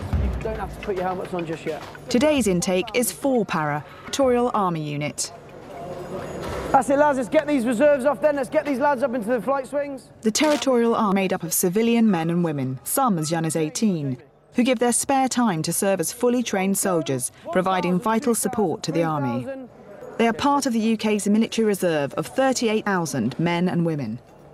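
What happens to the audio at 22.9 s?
At 22.86 s, part of the compressed stream is corrupted, a case of damaged data in a compressed stream. The decoder can't read the affected frame correctly, loses its place in the bitstream and has to hunt for the next valid frame header before decoding resumes. The disruption lasts only a few milliseconds, so it comes through as a tiny, sharp blip or chirp that briefly interrupts the sound and then clears.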